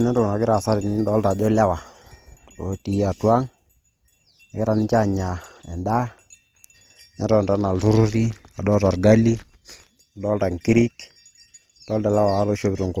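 Throughout the speech, the sound carries the artefacts of heavy compression, even though the spectrum extends right up to about 20.1 kHz. This is low-bitrate audio saved at a high bitrate: the traces fit a likely first pass through Opus at around 24 kbit/s, later re-encoded as MP3 at around 256 kbit/s. The generous second encoding enlarges the file but cannot restore detail the first one discarded, so its artefacts remain audible.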